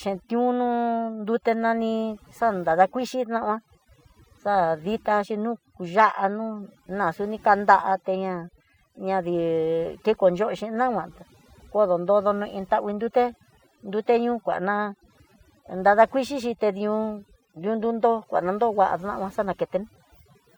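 Throughout the speech, overdone noise removal is evident: an aggressive noise reducer gates individual frequency bands whenever they approach its noise estimate, taking quieter voice components with them. The background drops and breaks up into twinkling specks.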